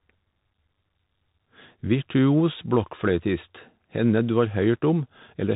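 Throughout, the speech carries Bluetooth CVSD headset codec damage: nothing above 4 kHz, scratchy s sounds, slope-overload distortion on loud peaks, and granular hiss, consistent with 64 kbps CVSD.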